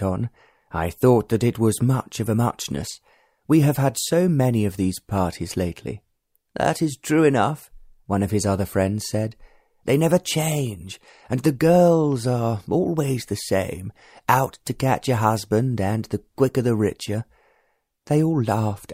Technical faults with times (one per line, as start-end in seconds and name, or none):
none